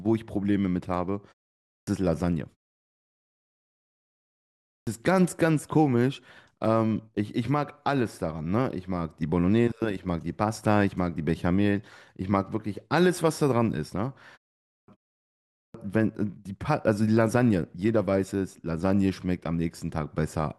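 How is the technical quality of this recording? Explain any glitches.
The recording has one recurring glitch. Speech restarting after a pause is cut short at 1.59, 4.56, 14.59 and 15.44 seconds. This is clipped start after a pause. The output device sleeps in silence, so about 0.28 to 0.31 s of each restart is lost. Speech then begins abruptly.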